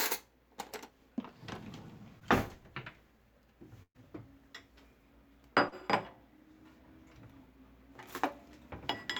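At 2.19 to 2.23 s there's a short concealed packet loss: about 20 ms of audio never arrived in time, and the receiver patched roughly 12 ms of it by carrying the preceding sound forward before easing back into the real signal. It comes across as a quick smear. The same thing happens at 5.69 to 5.74 s, but bigger. About 40 ms goes missing and about 31 ms is filled.

Between those, from 3.83 to 3.97 s, there's a burst of packet loss. Roughly 120 ms dropped out in a row. The concealment stretched the last sound across about 119 ms while turning it down, and there's around 60 ms of near-silence before the audio picks up further along. You hear a held, fading tail, then a jump, with that stretch of sound simply gone.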